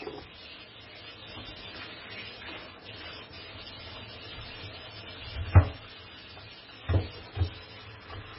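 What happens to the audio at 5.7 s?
At 5.7 s, as throughout, everything above 5.5 kHz is gone and the sound swirls watery, likely from heavy MP3 compression. Its starved encoder cuts treble and drops weak frequency lines frame by frame, which fits a bitrate near 16 kbps.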